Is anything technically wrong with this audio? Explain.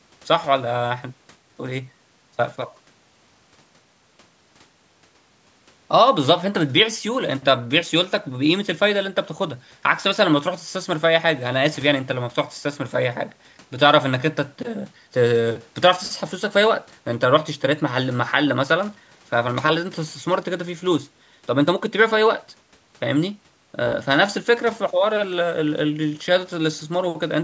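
No, the speech shows only the expected call microphone processing, with the lowest bass trimmed by its high-pass filter and nothing above 8 kHz.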